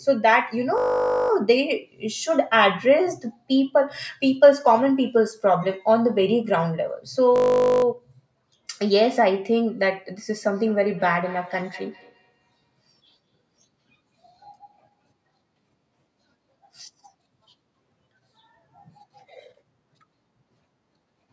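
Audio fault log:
0.78–1.30 s and 7.36–7.84 s, system hang loop: each time the sound freezes into a steady, harsh 50 Hz buzz. The same 20 ms slice replays exactly, about two dozen times, because the system stalled while the audio hardware kept cycling one short buffer, with little audio lost.
10.51–15.13 s, feedback echo between two devices: a faint, thin repeat trails the speech at a fixed gap of about a fifth of a second, peaking about 23 dB below the voice. A second device in the room replays this microphone's signal, which the microphone then picks up again.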